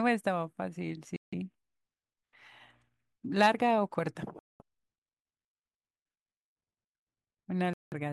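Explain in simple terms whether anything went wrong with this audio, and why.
The speech cuts out completely three times: from 1.16 to 1.34 s, from 4.39 to 4.62 s, and from 7.73 to 7.94 s. Each gap lasts about a fifth of a second. Every time the sound comes back it has moved on, as if it kept playing while you couldn't hear it. That pattern points to a likely Bluetooth dropout, where bits of audio didn't reach the headphones in time and were simply skipped.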